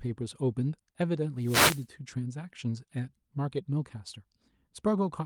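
From 1.39 to 1.87 s comes a wireless microphone noise hit: the radio link fades, receiver hiss swishes up, smearing broadband noise across the spectrogram.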